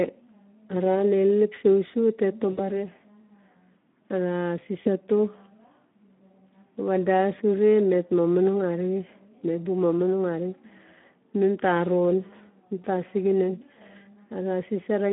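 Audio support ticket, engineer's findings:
Speex codec throughout. Hoarse, noisy speech with a gritty edge. Band limited to 200 Hz to 3.5 kHz, nothing above. Too few bits for the CELP excitation, which fits a low Speex mode near 11 kbps.

VoIP packet loss concealed by the speech codec at 2.51 to 2.79 s and 4.83 to 4.91 s. Speech stretches and fades, then recovers weak or distorted. Decoder extrapolating the last pitch and filter. Gaps of 60 ms, about three frames, and 20 ms.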